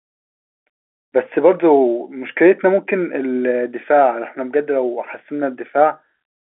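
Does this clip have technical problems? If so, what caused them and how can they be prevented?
No, there are no technical problems in this speech clip. It carries the narrow sound of G.711 telephone coding, with the band limited to about 250 Hz to 3.4 kHz.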